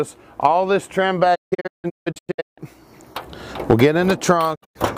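At 1.34 to 2.60 s the sound breaks into a string of short holes, a digital broadcast dropout where the receiver stopped getting good frames and muted with quick 20 ms fades. The gaps add up to about 0.9 s, the longest 160 ms. A briefer one hits at 4.54 to 4.77 s, losing about 160 ms.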